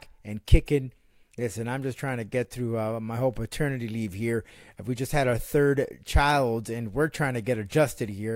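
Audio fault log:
Nothing stood out on listening to this speech recording.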